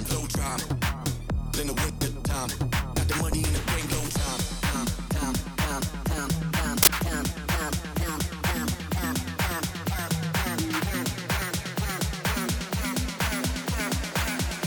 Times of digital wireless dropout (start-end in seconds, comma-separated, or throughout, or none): none